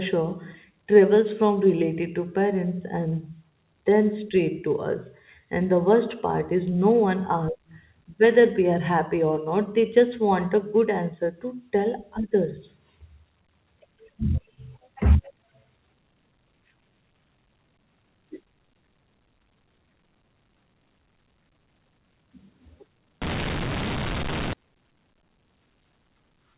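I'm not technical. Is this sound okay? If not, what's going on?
No. From 23.22 to 24.53 s the phone coding gets a mu-law and A-law mix-up: it's saved one way and read back the other, so the speech turns harsh and gritty and the gaps fill with hiss.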